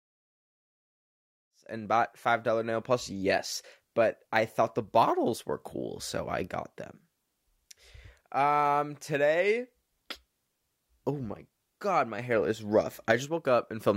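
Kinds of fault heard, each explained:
None heard; this speech recording carries no audible faults.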